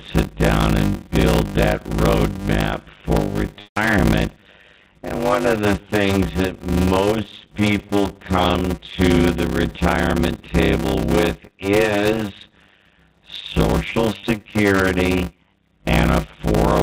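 Throughout, a block size mismatch (padded) means one stage writes shorter blocks than the next reads, which fits 256-sample blocks read as 480. The zero-filled remainder puts a gap in every block, producing a 100 Hz buzz, and the speech runs at about 0.53 times normal speed with its timbre unchanged.

From 3.6 to 3.77 s, packet loss with pitch repetition covers about 90 ms of missing audio. The receiver repeats the last pitch period and fades it out, so the speech briefly holds a buzzy tone, drops toward silence, then cross-fades back in.

At 14.17 to 14.23 s, a shorter loss of about 30 ms is bridged the same way. Because the gap is brief, the repeated pitch period does not have time to fade out fully, and it sounds like a slightly held, buzzy note within the band-limited G.711 telephone audio, which stops at 4 kHz.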